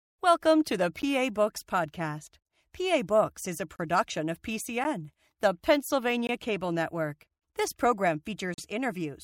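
Sharp ticks and brief hard dropouts occur at 1.02 s just after "to the", 3.76–3.79 s just after "is a", 4.84 s, 6.27–6.29 s and 8.54–8.58 s. Each is a block of digital silence, 10 to 40 ms of samples replaced by zeros, cutting out and back in with no fade.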